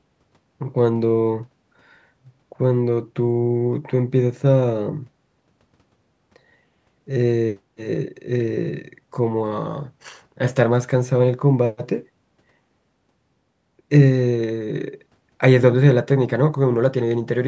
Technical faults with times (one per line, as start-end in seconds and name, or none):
none